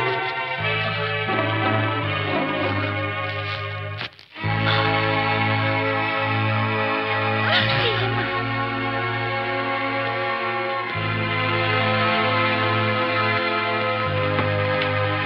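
No technical faults are audible.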